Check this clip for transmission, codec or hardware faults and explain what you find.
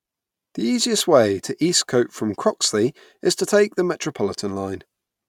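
Nothing in the recording points to a transmission, codec or hardware problem. The speech comes through with no faults to report.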